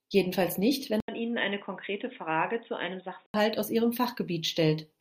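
At 1.00 s, after "nicht wenn", an 80 ms gap leads into dull, boxy speech with nothing above 3.8 kHz, slightly quieter and over a new faint noise. The input likely switched to a poorer device. Unlike filtering, level and noise change too, until 3.34 s, before "aus ihrem".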